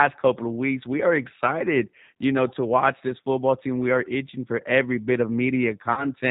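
G.729 codec damage is plainly audible throughout: the speech is rebuilt from a vocal tract filter and a few pulses per frame, so it sounds band-limited, rough and synthetic, consistent with G.729A at 8 kbit/s. VoIP packet loss concealed by the speech codec appears at 3.08 to 3.13 s, between "you know to watch" and "football team". A gap the size of one 20 ms packet is filled by extrapolating the last pitch and filter, producing a brief stretched smear that lingers. It recurs at 5.93 to 6.07 s, where about 40 ms, likely two packets, is concealed, giving a longer, fading stretch and weak, distorted recovery.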